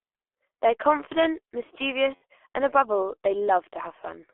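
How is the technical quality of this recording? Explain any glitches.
The recording is heavily degraded, with a narrow, low-bitrate phone sound throughout and one brief dropout.

The G.723.1 codec shapes the whole clip. Speech is confined to about 300 Hz to 3.4 kHz, so it sounds muffled. The sparse, slowly updated voice model fits a 6.3 kbit/s stream. It leaves the voice hoarse and consonants smeared.

At 2.15 to 2.23 s there is VoIP packet loss concealed by the speech codec. About 60 ms went missing, which fits two lost 30 ms frames. The decoder repeated its last pitch and filter at falling gain, so the voice stretches into a fading buzzy tone or coloured noise and stays weak just after.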